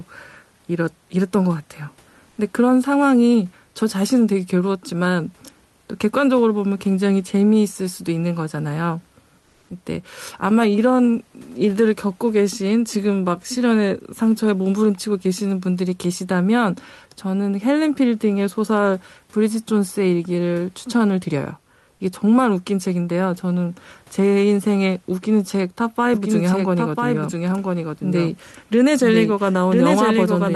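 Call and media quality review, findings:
Comfort noise in place of the background, 2.29–2.37 s (80 ms) and 9.39–9.69 s (300 ms): room tone in speech pauses turns flat and featureless, about 1 dB quieter. Spectrogram shows smooth, texture-free noise patches. The cause is likely Opus DTX, where the decoder synthesises noise while the sender stops transmitting.

Doubled audio track, 26.14 s to end: a full-band second copy trails by about one second, roughly 5 dB down, with a hard onset and no reverb tail. The waveform shows repeated envelopes offset by about 1 s. The likely cause is a second capture path or an edit mixing two copies out of step. The spectrogram shows the duplicate pattern with the same band edge near 12 kHz as the call codec.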